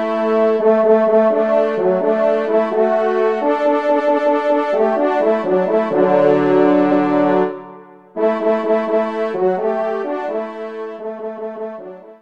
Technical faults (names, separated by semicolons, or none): repeated frames